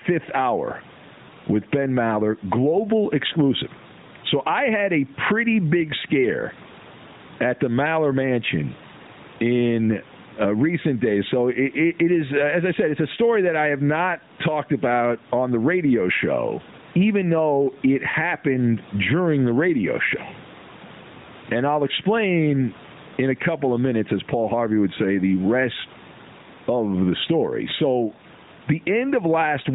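Gain pumping runs through the whole clip: the gain swings by roughly 15 dB under each loud stretch of speech, flattening the dynamics. The likely cause is input gain set far too high, with a fast limiter clamping down on peaks. The room noise sits well beneath the speech, and the narrowband mobile codec band-limits everything to 4 kHz.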